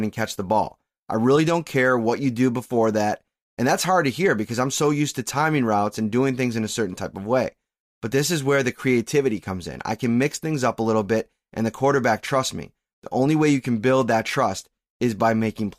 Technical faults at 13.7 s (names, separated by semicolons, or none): none